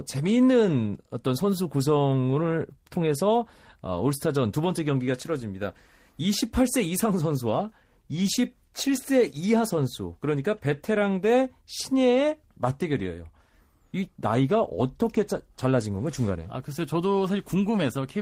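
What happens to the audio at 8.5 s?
Nothing goes wrong at 8.5 s: the speech runs through that moment intact, with no dropout, click, glitch or other fault to be heard.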